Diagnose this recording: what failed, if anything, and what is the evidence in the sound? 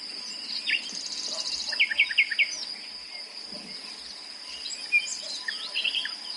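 The codec stage likely failed through heavy MP3 compression, audible across the whole clip. Nothing sounds above 11.2 kHz, a hard treble cut, and the plainly audible watery swirl comes from weak frequency lines dropping in and out between frames, which fits a bitrate near 48 kbps.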